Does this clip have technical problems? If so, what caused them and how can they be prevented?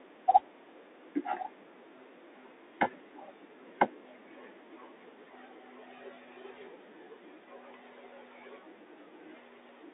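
Yes. The Bluetooth CVSD headset codec runs throughout the speech, passing only about 300 Hz to 3.7 kHz, with scratchy s sounds and a granular hiss underneath. That grain comes from a one-bit coder stepping up and down around the signal, while its adaptive step lags loud high sounds and distorts them, and it is what sets this apart from a clean telephone band-limit. Recording through a wideband headset profile or a wired microphone prevents it.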